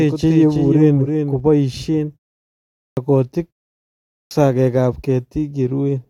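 A second capture path, or an edit holding two copies out of step, has likely mixed the speech in twice. From the start to 1.4 s, a doubled audio track trails the original by about 0.3 s, roughly 5 dB quieter, dry and without room colour, then cuts off abruptly.

At 2.85 s and 4.18 s, the output device, having gone to sleep during pauses of about 0.75 s, takes time to wake again. Each time, the clipped start after a pause swallows roughly 0.12 to 0.13 s, so the speech bursts abruptly out of silence, missing its first sounds.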